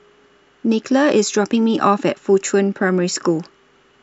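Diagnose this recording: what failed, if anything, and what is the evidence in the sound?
Nothing in the chain has failed here: the speech carries no audible defect from any stage between capture and playback. There is no sound of the kind that would point to a problem in wiring, conversion, buffering, processing, transmission or storage.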